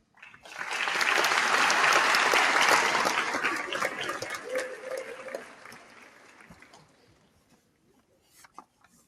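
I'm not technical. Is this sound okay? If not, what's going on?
No. A noise suppressor applied to music or sounds is at work across the whole clip. This is a filter built to clean up speech, and it treats steady tones, room ambience and echoes as unwanted noise. It keeps pushing them down by large amounts. Sharp, sudden sounds mostly get through, but anything held or fading sinks, so the level pumps and flutters and the sound feels thinned out.

Sound cut by the noise suppressor is clearest in two places: the opening, from 0 to 0.18 s, and from 5.1 s to the end. In these stretches the filter mistook the sound itself for noise and turned it down noticeably more than the rest of the clip. Steady or fading parts drop away and their natural tails are clipped short.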